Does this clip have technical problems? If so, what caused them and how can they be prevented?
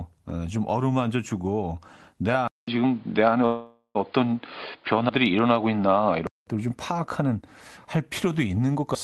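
Yes. Input switched to a poorer device, 2.48 to 6.47 s: after a 200 ms silence the sound turns dull and boxy, with a level change of about 5 dB, and new noise about 35 dB down. The likely cause is the system switching to another microphone or a headset call profile. Lock the input device and disable automatic headset switching during recording.

Call audio freeze, 3.45 to 3.97 s: the last sound is stretched into a fading buzz for about 0.5 s, ending in 80 ms of silence, then the audio resumes with nothing missing. Delayed packets likely emptied the jitter buffer. A steadier network connection or a deeper jitter buffer prevents this.

Dropped buffer (overrun), at 5.09 s and 8.95 s: each is a jump, with the sound skipping ahead about 70 ms, likely because the program did not collect its samples before the hardware overwrote them. Larger buffers or higher priority for the audio thread prevent overruns.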